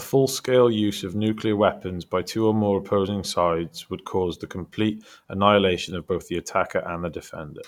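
Listening to the speech here, nothing stood out as a technical problem at any point.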